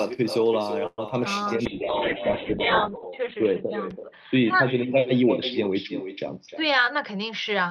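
Throughout the speech, an echo with no canceller repeats each phrase about 11 dB quieter and roughly a third of a second late, as a thinner copy rather than a reverberant tail. From 0.86 to 1.12 s a call audio freeze stretches the last sound into a fading buzz of about 115 ms, then 30 ms of silence, before the speech resumes with nothing skipped, likely because late packets emptied the jitter buffer. Unlike a dropout, it adds a gap instead of removing audio. At 1.66 s a call bitrate drop takes the encoder from 48 to 7 kbps and narrows the bandwidth from 20 kHz to 4 kHz, so the speech turns muffled and rough to the end, bottoming out for about 1.2 s. From 6.29 to 7.69 s a jitter buffer speed-up plays the speech at 106% by trimming pitch periods, removing about a tenth of a second. The words sound hurried while the pitch stays unchanged, which sets it apart from a tape-speed change.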